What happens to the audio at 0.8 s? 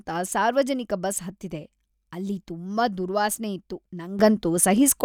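Nothing goes wrong at 0.8 s; the speech there is intact, with no dropout, click, distortion or other fault audible at that moment.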